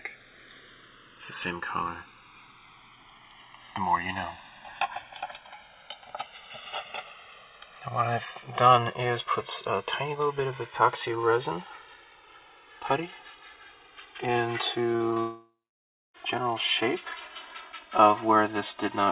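Throughout the clip, the two channels drift apart: their clocks differ by roughly 150 ppm, so the inter-channel delay creeps up to about 3 ms by the end. Summed to mono, this gives slow flanging, and a spectrogram shows comb notches sweeping gradually across the band, all below a hard ceiling at 4 kHz that fits narrowband G.711.

From 14.92 to 15.18 s, repeated packet loss produces a choppy, robotic stutter. Several short holes, the longest 40 ms, are each patched by extending the preceding sound, so about 38% of that span is concealment. The waveform shows a stuttering envelope, and the spectrogram shows smeared, repeated frames.

From 15.2 to 16.16 s comes what is likely a long network dropout. A fading buzz continues the last sound, then roughly 0.6 s of silence follows before the audio resumes with that stretch missing. The waveform flattens to near zero, leaving a blank vertical band on the spectrogram.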